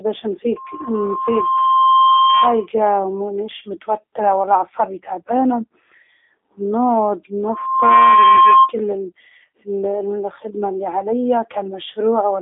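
Throughout, the speech carries G.729 codec damage. Nothing passes above 3.8 kHz, and the band sits near 300 Hz to 3.6 kHz. The sound is rough and synthetic, as a low-rate model rebuilds it frame by frame. This fits an 8 kbit/s stream.

From 7.44 s to 8.73 s, a loudspeaker feedback squeal appears. A microphone is hearing its own loudspeaker, and the loop gain passes one at 1.1 kHz. That tone swells over about half a second. It ends up a few dB above the speech.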